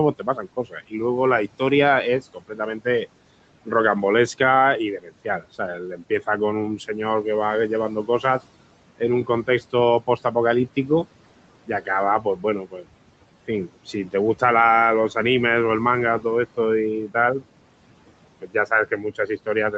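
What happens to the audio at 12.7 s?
At 12.7 s the noise suppressor is misjudging parts of the speech as background. This is speech cut by the noise suppressor, which recurs between 0.19 and 15.16 s and amounts to roughly two seconds of affected speech in all. Quiet consonants, word endings and softer stretches get pulled down together with the noise, by up to about 19 dB at the worst point. They sound swallowed or faint.

Underneath that, noise suppressor artifacts run through the whole clip, 12.7 s included. The suppressor works frame by frame, lowering each frequency band it treats as steady noise, here by about 18 dB. The background therefore drops away in the gaps and swells back under the voiced sound. The room noise behind it sits about 18 dB under the speech.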